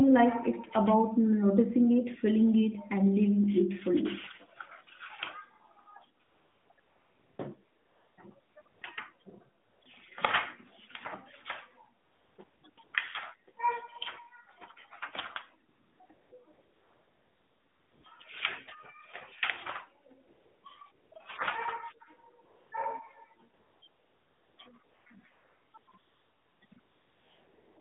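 From 6.2 s to the end at 27.8 s, AMR comfort noise repeatedly takes over: the phone judged the talker silent, stopped sending speech frames, and the receiver substituted synthetic noise. Across gaps of 15 ms to 1.5 s (longest 16.5–18.0 s), the real background becomes smooth, steady hiss that flicks in and out, all within the narrowband AMR band that fits 12.2 kbps.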